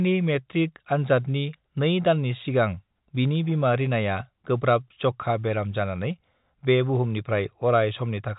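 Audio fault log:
No faults to log for this speech clip.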